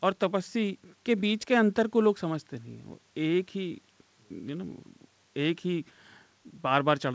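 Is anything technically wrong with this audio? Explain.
No, the speech shows no technical faults, and the ordinary band limit of a wideband call codec can be heard, with nothing above about 8 kHz.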